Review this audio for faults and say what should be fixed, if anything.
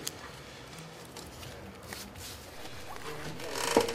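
There's a DC step at 2.56 s: the waveform's zero line jumps by about -45 dBFS, giving a low thump, and the offset holds to the end. Prevent it with a high-pass or DC-blocking filter after the converter and any input switching.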